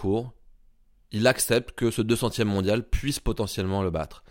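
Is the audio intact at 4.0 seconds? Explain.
Yes, the speech at 4.0 seconds is intact, with no fault there.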